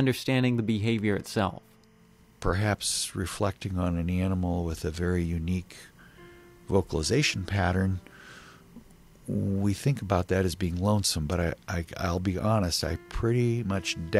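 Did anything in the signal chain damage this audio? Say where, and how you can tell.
Yes, timecode bleed in the analogue wiring: a steady chirpy warble near 1 and 2 kHz sits roughly 40 dB under everything throughout, 25-frame LTC leaking across.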